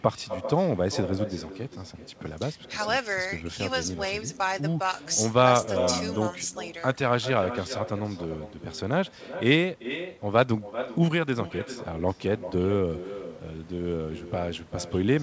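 From start to finish the speech carries an echo with no canceller: the far end's loudspeaker feeds its microphone, and each phrase returns around 400 ms later, about 10 dB down and thinner, over audio band-limited to 8 kHz, which fits a G.722 call codec.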